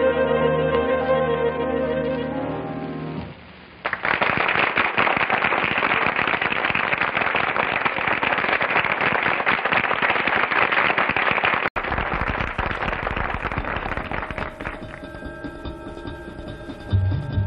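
Input switched to a poorer device from 0.0 to 11.76 s: the audio sounds dull, with nothing above 5 kHz, faint extra background noise and a noticeable level shift. An 80 ms silence follows before the sound clears, likely from a change to a different microphone.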